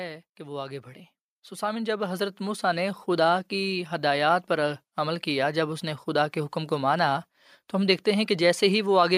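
Automatic gain rising runs from 0.36 s to 6.66 s. The gain control judged the speech input too quiet and raised its gain slowly, by about 11 dB over those six seconds, so the voice and the background noise swell together instead of the level holding steady.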